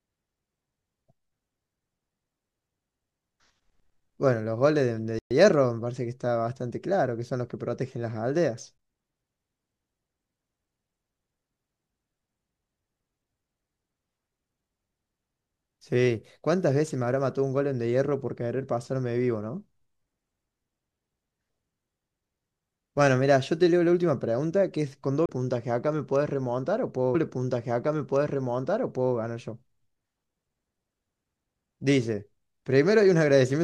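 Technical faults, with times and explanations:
5.19 to 5.31 s, playback stall: the speech cuts out mid-flow for 120 ms, then resumes where it stopped. The gap sounds like the output starving, likely because the player's buffer emptied or its thread was briefly blocked before recovering.
8.78 s and 25.26 to 25.29 s, CD skip: each is a short tick with a brief mute, very short at 8.78 s and roughly 30 ms at 25.26 s, after which the speech jumps to a different point, as when the laser lands on another turn of the disc's spiral.
27.14 to 29.14 s, stream segment repeated: about two seconds of speech play a second time, introduced by a small blip at the jump back. The player fetched or queued the same segment twice, adding 2.01 s to the running time.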